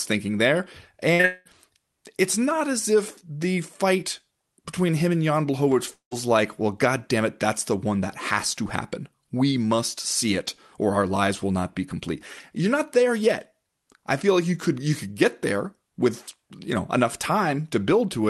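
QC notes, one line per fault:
1.13–1.21 s, burst of packet loss: just after "thinking there", a run of packets arrived too late to play. The receiver stretched the last sound for about 60 ms, letting it fade, so the sound smears rather than making a clean cut. When real audio resumes, roughly 60 ms of the original is missing. This is the first of three back-to-back gaps.
1.21–1.25 s, short concealed packet loss: immediately after, about 20 ms more went missing. The decoder patched the hole from the tail of the preceding sound and cross-faded back into the incoming stream, heard as a brief wobble on top of the previous gap. Because the patch is so short, it mainly blurs the join.
1.25–1.47 s and 5.93–6.13 s, long network dropout: in the first event, a fading fill of the last sound covers about 0.2 s and never drops to silence, extending the earlier smear before normal audio returns. In the second, about 0.18 s is gone before "like well god damn". 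The fill fades and leaves a near-silent stretch of about 0.1 s. The likely cause is a stall in packet delivery, with the Opus decoder (operating at a 12 kHz audio bandwidth) extrapolating until it gave up.
5.72–5.83 s, loose connector crackle: a burst of irregular scratchy crackle lasting about 0.12 s, just before the second dropout. This points to an intermittent contact somewhere in the analogue chain making and breaking repeatedly, chopping the signal into fragments. The ragged, uneven texture sets it apart from the smoother fills left by network concealment.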